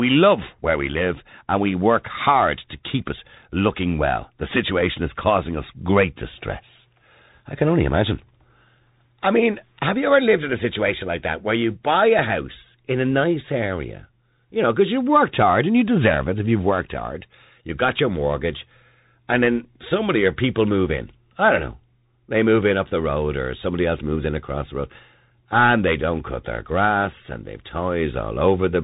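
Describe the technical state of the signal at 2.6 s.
At 2.6 s the signal carries Bluetooth CVSD headset codec damage, as it does across the whole clip. The codec encodes the waveform one bit per sample, signalling only up or down, with a step size that adapts. Fast, loud high sounds outrun that step and distort. The damage is plainly audible here. Nothing passes above about 3.8 kHz, the s sounds turn scratchy, and a granular hiss sits under the speech. This points to a 64 kbps narrowband link.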